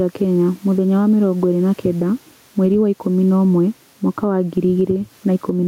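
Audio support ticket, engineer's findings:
Gain pumping, whole clip. Gain swings about 10 dB. Faint room noise, some 40 dB below the speech. Likely cause: input gain set far too high, with a fast limiter/compressor clamping every peak. Dynamics flattened, speech squashed.

Channel delay (comb filtering), 3.30 to 5.53 s. Top end turns dull. One channel lags by about two samples, roughly 0.05 ms. Mono sum cancels at regularly spaced frequencies, first notch near 10 kHz, so the highs thin out.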